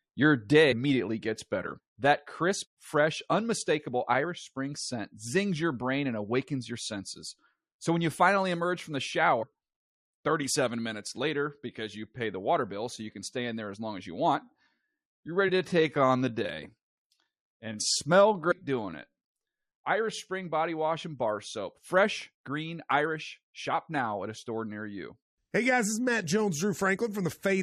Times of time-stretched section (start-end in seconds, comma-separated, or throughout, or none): 14.39-19.79